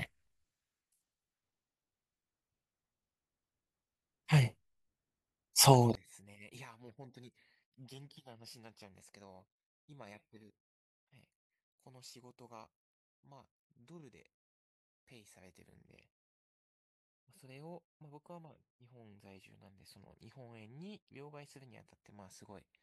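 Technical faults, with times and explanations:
5.95 s to 22.82 s, one channel inverted: the likely cause is reversed polarity on one stereo channel, so when the two sides are summed to mono, everything they share cancels. The speech, sitting centred and nearly identical in both channels, drops by about 30 dB and all but disappears. What remains until the end is only the small difference between the channels, heard as a faint residue of the speech.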